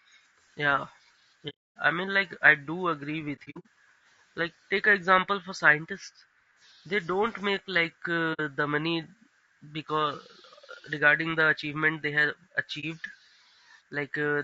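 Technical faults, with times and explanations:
throughout: low-delay AAC compression. The speech sounds rough and grainy, with noise filling between the harmonics and a thin, synthetic top band. This is likely AAC-ELD at a rate that fits about 32 kbps. Its short frames resolve pitch poorly, and the damage is steady rather than coming in bursts.
1.49–1.77 s, 3.35–3.67 s, 8.33–8.40 s, 12.80 s: AAC frame loss with muting. The sound fades into silence and back out, lasting 270 ms, 180 ms, 60 ms and 30 ms. At 3.35 s the loss is broken into brief holes, the longest under a tenth of a second. Overlapping windows soften the edges, unlike hard dropouts.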